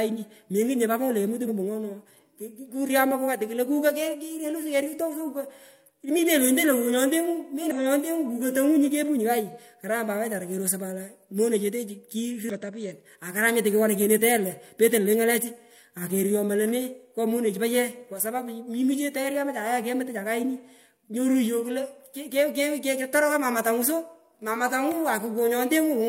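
At 1.44 to 1.49 s, 7.71 to 7.76 s and 12.50 to 12.56 s, damaged data in the compressed stream makes the decoder misread frames and lose sync, producing brief glitches.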